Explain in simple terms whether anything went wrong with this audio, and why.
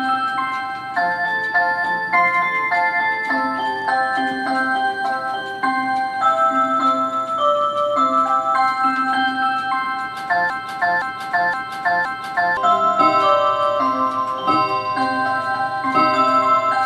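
Between 10.5 and 12.57 s the audio gets stuck in a broken-record loop: one piece about 0.52 s long plays four times in a row, each repeat identical and butted straight against the last. The likely cause is a stall somewhere in playback or streaming, so the system kept resending the last fragment it had instead of moving on. Whatever should have been heard during those two seconds is missing.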